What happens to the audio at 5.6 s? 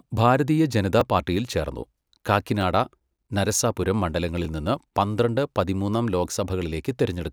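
Nothing goes wrong at 5.6 s: the speech carries on intact through that moment, with no dropout, click or distortion to be heard.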